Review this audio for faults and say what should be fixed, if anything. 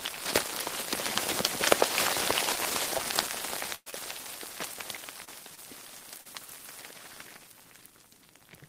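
Short concealed packet loss occurs at 2.97 to 3.01 s, 3.90 to 3.94 s, 5.24 to 5.29 s, 5.55 to 5.59 s and 6.21 to 6.27 s. Each time about 20 ms of audio, 40 ms at 6.21 s, failed to arrive, and the receiver patched the gap by extending the preceding sound before crossfading back. The result is a brief smear or wobble. On a spectrogram each appears as a short stretch of repeated or smoothed harmonics with a soft seam at either edge.

A burst of packet loss runs from 3.75 to 3.88 s. About 120 ms of sound is gone. Concealment stretched the last sound for roughly 110 ms, fading it into a held buzz or hiss, and about 40 ms went fully silent before playback resumed further along. The waveform shows a decaying, overly regular segment dropping toward a flat line. The spectrogram shows frozen, blurred bands fading to blank, then a hard restart. The 25 ms fill at 3.90 s follows almost immediately.

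To prevent these faults, give the call more jitter-buffer depth and add forward error correction or redundancy so that lost packets can be rebuilt before playout.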